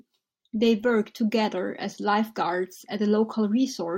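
A speech recording, and nothing is technically wrong with it.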